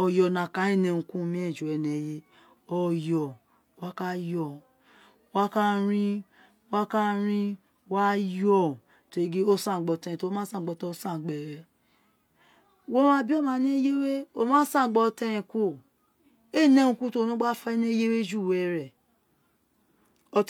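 Nothing goes wrong anywhere in this speech recording, so there's no technical fault to point to at any moment.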